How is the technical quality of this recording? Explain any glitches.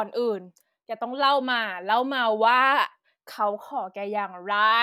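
No glitches are audible in the speech recording; there are no dropouts, level jumps or other artefacts anywhere in it.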